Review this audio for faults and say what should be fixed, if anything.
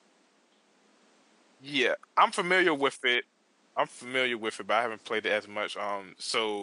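Nothing here needs fixing, since no faults turn up anywhere in the recording, and the room's own background sits well out of the way at about 37 dB below the speech.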